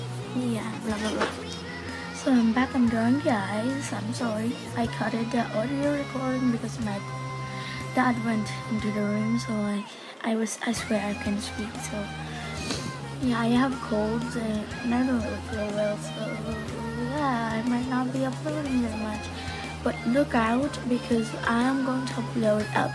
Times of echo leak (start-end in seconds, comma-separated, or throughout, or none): none